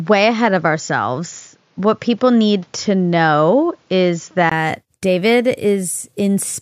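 Speech that sounds band-limited and dull from 0.00 to 4.52 s, with nothing above 7.2 kHz and a faint added noise floor, likely an input switched to a poorer device. A spectrogram shows a hard ceiling that lifts abruptly after a 20 ms waveform gap, at unchanged level.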